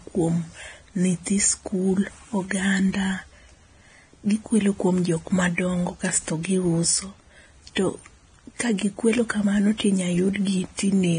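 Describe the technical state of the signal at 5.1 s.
At 5.1 s the speech carries the same damage as the rest of the clip, and it sounds like transcoding between lossy codecs. Nothing comes through above 9.7 kHz, so the top end is dull. The mix of artefacts points to a Vorbis pass at roughly 20-odd kbit/s, likely followed by a WMA encode at a much higher rate. That second encode spent its bits preserving the earlier artefacts and added its own on top, so both sets are heard together.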